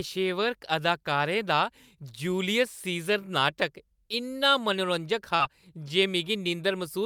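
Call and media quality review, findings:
Short concealed packet loss, 5.35–5.42 s: brief smear and wobble in the speech. Receiver jitter buffer/PLC: about 40 ms never arrived and was filled by extending the previous sound, then crossfaded back.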